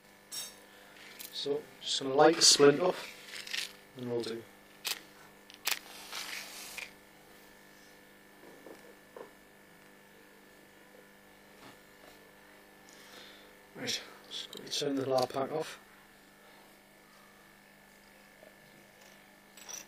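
From start to end, a channel delay (doubling) puts one channel 40 ms late; summed to mono, the audio gains an equal-level slap echo.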